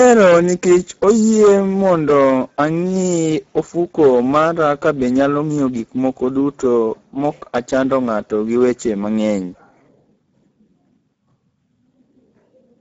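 From the start to 2.65 s, an input or converter stage was overdriven by about 10 dB, so every peak that exceeded its ceiling was sliced flat. This hard clipping turns the squared-off tops into a spray of high harmonics, and at this level of overload the speech carries a harsh, gritty fuzz on each loud syllable rather than occasional crackles. The distortion stops after 2.65 s, where the signal falls back within range.

Throughout the whole recording, the speech has been squeezed through the Speex codec at a low quality setting. The sound points to a bitrate of roughly 10 kbps. With so few bits to describe the excitation, the codec rebuilds voiced sounds only approximately, leaving the speech plainly noisy and hoarse. Nothing remains above 7.6 kHz, and the upper band that does survive sounds like a thin, noise-like hiss rather than real detail.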